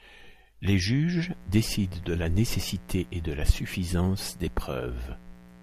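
From 1.23 s to the end of the speech, a mains buzz sets in and stays. Sharp switching spikes leak into the signal twice per 60 Hz cycle, probably from a dimmer, rectifier or unshielded cable. The result is a steady, raspy buzz about 25 dB below the speech. On a spectrogram it appears as a comb of horizontal lines at multiples of 60 Hz reaching into several kHz. In the waveform, narrow spikes repeat every 8.3 ms.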